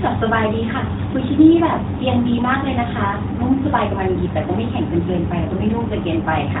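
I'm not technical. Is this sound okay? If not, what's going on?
Yes, nothing is wrong: the speech has passed through an AMR narrowband mobile codec, as on an ordinary phone call, and that path is working as intended.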